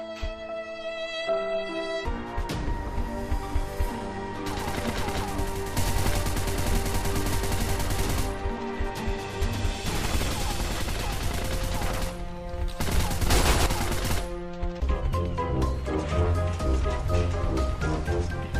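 No technical faults can be heard in this audio, so there are none to describe in time order.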